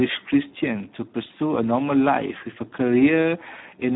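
Throughout, Speex codec damage leaves the speech hoarse and noisy, consistent with roughly 8 kbps. Unlike plain band-limiting, its starved excitation roughens the voice itself, with nothing above 3.8 kHz.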